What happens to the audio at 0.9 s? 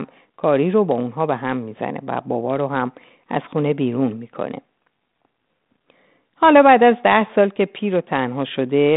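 Nothing goes wrong at 0.9 s: the speech there is intact, carried through the G.726 ADPCM telephone path as normal, with its narrow band topping out just under 4 kHz.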